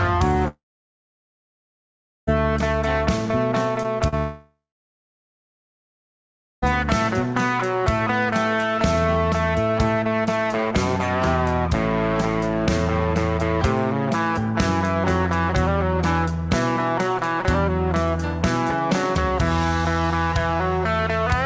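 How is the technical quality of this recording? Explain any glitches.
The recording has two kinds of glitch, both from the network side of a call. Nothing above 8 kHz, which fits a wideband call codec like G.722 at 64 kbps.

Long network dropouts, from 0.48 to 2.29 s and from 4.18 to 6.64 s, are the likely cause of the two big holes. Audio stopped arriving, so the receiver carried the last sound on briefly and let it fade, leaving about 1.7 s and about 2 s of silence. The sound then picks up further along, with those stretches gone for good.

Short concealed packet losses, at 3.83 to 3.86 s and 4.08 to 4.14 s, are much smaller gaps of about 20 ms and 40 ms that never reached the decoder in time. The receiver patched each one by extending the sound just before it and blending back in, so you hear a quick smear or wobble.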